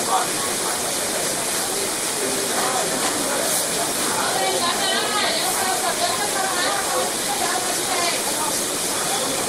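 No technical faults can be heard anywhere in these sounds, and the signal holds steady throughout.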